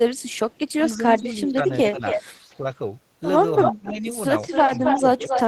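From 0.18 to 0.59 s a very faint copy of the speech trails it by 321 ms. It returns nearly as loud as the speech at 1.73 to 2.21 s, 3.61 to 3.93 s and from 4.4 s to the end, now 265 ms behind. This is echo leak, likely a loudspeaker-side echo canceller passing its microphone pickup back into the call. Overlapping these, the speech dips by up to about 15 dB between 0.76 and 2.65 s, at 3.71 to 4.05 s, and from 4.64 s onward. This is speech suppressed in double talk: with both sides active, the canceller likely could not separate the talker from the returning echo and turned both down.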